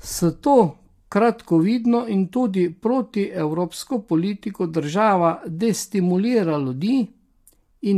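Throughout the speech, low-delay AAC compression is the likely culprit: short codec frames split pitch harmonics poorly, and a starved bitrate, consistent with around 32 kbps, leaves too few bits. The voice sounds plainly rough and grainy, with noise filling between harmonics and a thinned, synthetic-sounding top band.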